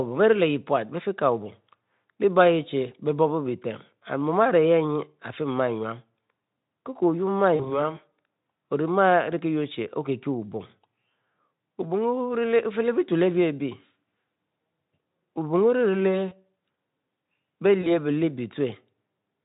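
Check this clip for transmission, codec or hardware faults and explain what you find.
There's one real fault, VoIP packet loss concealed by the speech codec, at 7.55 to 7.89 s, 16.29 to 16.35 s and 17.81 to 17.92 s. The Speex coding itself sounds clean, with little or no audible damage.

When packets go missing (about 40 ms at the first spot, 20 ms at the others), the decoder fakes the gap by stretching the last sound into a fading buzzy tone or coloured noise. The speech then stays weak for a moment until it recovers.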